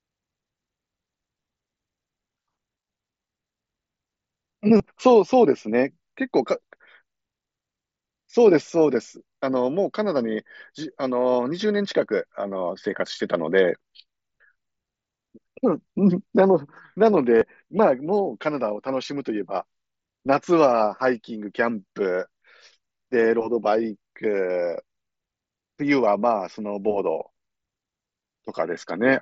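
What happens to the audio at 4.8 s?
A brief buzzy, held tone replaces the sound from 4.78 to 4.80 s, warbling slightly as it resumes: concealed Bluetooth headset packet loss, with roughly 22 ms of lost audio patched by repeating recent waveform.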